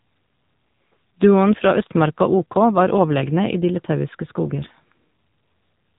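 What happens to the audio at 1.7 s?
At 1.7 s, as throughout the speech, the signal has passed through the AMR narrowband mobile codec. It samples at 8 kHz and rebuilds each 20 ms frame from a vocal-tract model fed by a few pulses, and the heavy damage fits a low mode near 6.7 kbps. Nothing above 3.8 kHz survives, so the speech sounds muffled and telephone-like, with a buzzy, synthetic edge where too few bits describe each frame.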